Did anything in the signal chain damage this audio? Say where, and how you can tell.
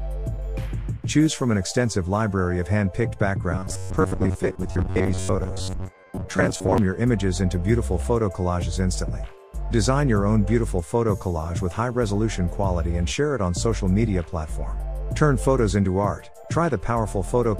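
Yes. At the driver or buffer stage, audio likely arrived too seldom, so about half was skipped and the gaps filled by replaying short buffers. From 3.52 to 6.78 s this gives robotic sound from repeated short buffers: a metallic buzz at 93.8 Hz, fitting 10.7 ms loops.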